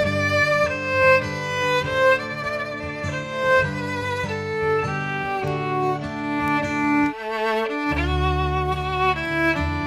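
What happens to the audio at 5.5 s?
At 5.48 s there is a bit error spike. A single sample jumps abruptly and then snaps straight back, as if one bit in the digital value flipped in memory or in transit. That flip shifts the sample by a power of two. It peaks at about -18 dBFS. You hear one sharp tick, spread across the whole spectrum and bearing no relation to the surrounding sound. It passes instantly.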